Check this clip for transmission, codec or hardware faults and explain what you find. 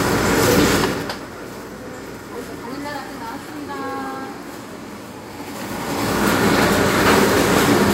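One fault is present: zipper noise, between 0.77 and 1.20 s. Over that span the level drops by roughly 15 dB, but in discrete 3 dB steps rather than a continuous ramp, at a rate of about ten steps per second. Each jump in gain is applied instantly with no interpolation, so every step puts a small discontinuity into the waveform. The result is a short train of ticks riding on the sound while the level falls.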